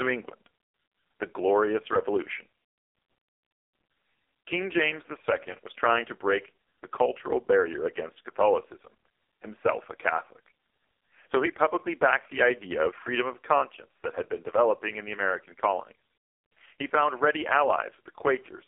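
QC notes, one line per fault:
throughout AMR narrowband mobile codec: buzzy, synthetic speech confined to 300 Hz to 3.6 kHz, with an empty spectrogram above 3.7 kHz. Heavy pulse-model buzz fits a 4.75 kbps mode.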